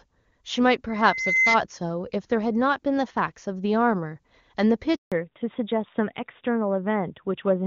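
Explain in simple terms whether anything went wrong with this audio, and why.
Yes, three things go wrong. From 0.89 to 1.60 s there is a loudspeaker feedback squeal. The microphone picks up its own loudspeaker, and a whistle at about 2.1 kHz feeds on itself, swelling over roughly half a second until it is somewhat louder than the speech.

At 4.96 s there is a handover gap. The phone switches the call to a different network link, and no sound gets through during the switch. The speech cuts out for 160 ms, until 5.12 s, and whatever was said then is lost.

Right after the gap, at 5.12 s, there is a fallback to narrowband. The call drops from HD Voice (AMR wideband) to an older telephone codec, so nothing above 4 kHz comes through to the end. The speech sounds duller and more muffled than before.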